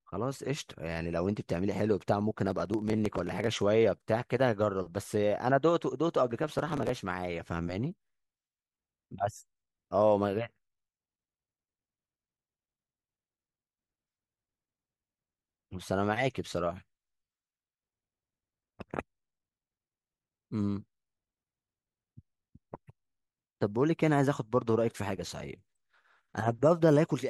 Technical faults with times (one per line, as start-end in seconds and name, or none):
2.46-3.62 processor overload crackle
6.42-6.89 processor overload crackle